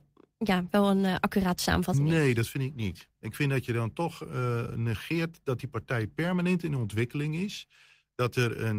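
Nothing in the recording stood out as a technical problem on listening.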